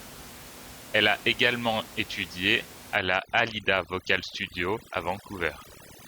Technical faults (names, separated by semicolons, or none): overdone noise removal